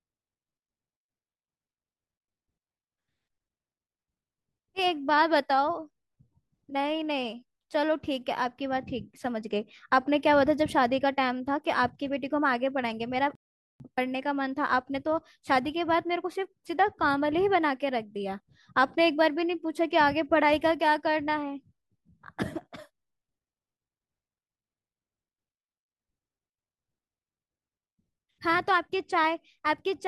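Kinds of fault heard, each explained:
Rebuffering stall: the speech halts into silence at 13.35 s for 0.45 s, then continues exactly where it stopped. Unlike a dropout, nothing is lost; only time is added.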